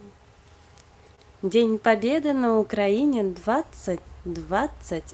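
From 1.15 to 1.19 s, about 20 ms of audio reached the decoder too late to play, an instance of short concealed packet loss. The receiver extended the preceding sound for roughly 17 ms and then blended back, leaving a brief smeared patch.

Right after, from 1.19 to 1.21 s, comes a lost packet rebuilt from error correction: a 20 ms stretch was lost, and the decoder played a low-bitrate copy carried in the following packet. It sounds rougher and noisier. At 3.05 to 3.15 s, the same recovery covers about 60 ms, which fits three separate lost packets, giving a longer grainy stretch. All of this sits on the Opus call path.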